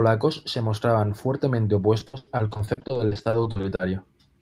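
From 1.99 s to 3.81 s, just after "se mostraban fuertemente", the speech turns choppy, with a robotic sound and pieces of syllables dropping out. This is repeated packet loss: data kept arriving late or not at all, and each hole, the longest about 100 ms, was papered over by stretching the last received sound. About 720 ms, roughly 40% of that stretch, is this synthetic fill rather than real speech.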